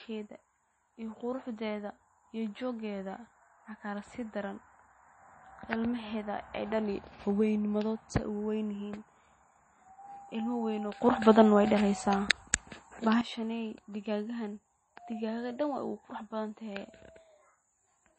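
Speech runs throughout with a hard treble ceiling at 8.3 kHz and plainly audible watery, swirling artefacts, likely MP3 compression at a low bitrate near 32 kbps; a plain low-pass filter would dull the sound without that swirl. From 11.01 s to 13.21 s the level leaps by about 12 dB instantly, background noise included, then drops back, which points to a sudden gain jump, likely an unramped digital gain step rather than a compressor or fade, which would move gradually.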